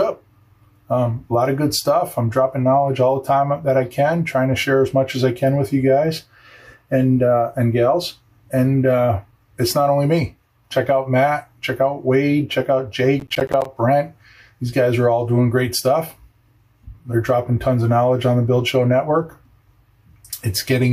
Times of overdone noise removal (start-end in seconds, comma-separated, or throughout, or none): none